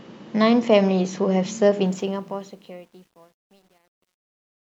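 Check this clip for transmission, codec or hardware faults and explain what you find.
One fault turns up: truncation distortion on a fade, running from 1.86 s to the end of the clip. The gain stage applying the fade-out, which starts around 1.86 s, drops low-order bits without dither, and the coarse steps fit a path keeping only 10 bits. As the speech level shrinks toward the smallest step, the waveform collapses into a few square levels. From 2.62 s onward the tail turns gritty.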